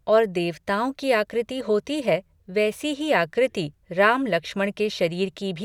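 Nothing goes wrong anywhere in this bit of speech, so there's no fault to walk through from one moment to the next.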